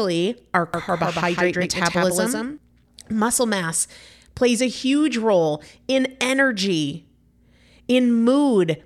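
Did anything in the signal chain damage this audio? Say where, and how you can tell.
Yes. From 0.74 s to 2.58 s the speech is doubled: the same audio arrives twice, likely because a second, slower capture or routing path was summed into the mix alongside the direct one. A full-band copy runs around 150 ms behind the original and roughly 5 dB quieter, with no decay or room colour, so it reads as a flat slapback echo. It switches on and off abruptly at those two points.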